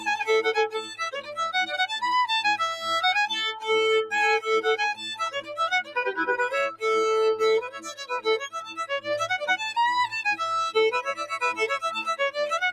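A noise suppressor built for speech stays active through the whole clip, treating sustained and ambient content as noise to be removed. Its gain keeps swinging by around 10 dB, so steady parts and decays are pulled down while sharper onsets pass, leaving the sound pumping and thinned, with tails that sink rather than ring out naturally.

Sound cut by the noise suppressor occurs where the processor misjudges material as noise and clamps it harder than the surrounding audio. From 0.74 to 1.39 s the level drops by about 12 dB for roughly half a second. From 5.35 to 5.59 s there is a shorter dip of about 12 dB. The deepest cut, about 15 dB, falls between 7.66 and 8.11 s, followed closely by a drop of about 10 dB from 8.45 to 8.84 s. A final dip of about 9 dB runs from 11.09 to 11.35 s. Each time, held or fading sound sinks in level while attacks mostly come through.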